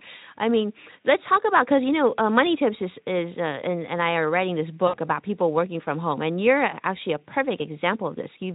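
At 4.87 s, after "I are writing this", VoIP packet loss concealed by the speech codec breaks the sound for about 60 ms, which fits three lost 20 ms frames. The Speex decoder repeats its last pitch and filter at falling gain. The result is a stretched sound that fades. Packets return by 4.97 s, before "about people working from", but the voice stays weak or distorted for a short while after.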